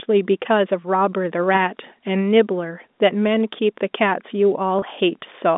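At 4.79 s, packet loss with pitch repetition bridges a 30 ms gap, fitting three 10 ms packets. It sounds like a briefly held, buzzy tone rather than a silent dropout or click.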